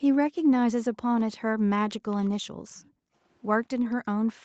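From 0.0 to 0.5 s and again from 0.72 to 0.95 s, the room sound drops away by about 40 dB. This is background gated by the echo canceller: it clamps the microphone while the far end plays. At 2.11 to 2.3 s, a faint delayed copy of the speech trails about 0.22 s behind, some 30 dB down. This is likely an echo leak from a loudspeaker the canceller missed. The background gates out again from 2.44 to 3.15 s. The same faint copy returns at 3.84 to 3.95 s, about 25 dB down, and at 4.27 to 4.32 s, about 30 dB down. A final gating dip runs from 4.33 s to the end.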